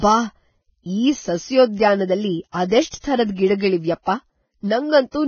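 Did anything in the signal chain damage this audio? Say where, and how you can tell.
Yes. Heavy Vorbis compression throughout, likely from a low-bitrate codec stage, makes the speech hissy and grainy. The spectrogram is empty above 6.6 kHz, which fits roughly 17 kbps.

Pre-echo appears at 2.52, 2.68, 2.88 and 3.00 s. Block-spread quantisation noise leaks 25 to 51 ms ahead of attacks, showing as short hiss smeared before each onset.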